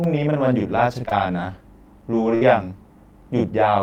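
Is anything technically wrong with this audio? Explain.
Yes, the speech has three kinds of fault.

Channel delay (doubling) runs throughout. One channel arrives 40 ms late and the two are summed to mono, so each syllable is heard twice as a tight slap. The waveform shows every onset repeated 40 ms later at equal height, and the spectrogram shows smeared attacks.

Short concealed packet loss occurs twice back to back, at 1.05 to 1.09 s and 1.09 to 1.13 s. Each time about 20 ms never arrived, and the receiver extended the preceding sound for roughly 18 ms before blending back. The result is a brief smear or wobble. The spectrogram shows repeated, slightly blurred frames instead of fresh detail.

A burst of packet loss hits at 2.35 to 2.43 s. About 60 ms went missing, so the decoder carried the last sound forward and faded it down. It is heard as a held buzz or fading hiss, and the speech then resumes further on. 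The waveform shows a decaying stretch, and the spectrogram shows static harmonics thinning out before the speech returns.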